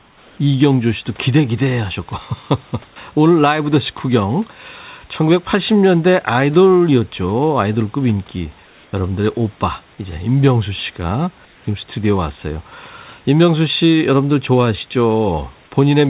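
At 0.00 to 0.38 s, 8.66 to 8.93 s and 11.45 to 11.66 s, the room background in the speech pauses gives way to a smooth, featureless hiss about 2 to 3 dB quieter, likely comfort noise in place of the background, generated by the receiver while the sender stopped transmitting. On a spectrogram these gaps show as flat, even grey texture without the real noise's detail, band-limited like the rest of the audio to below 4 kHz.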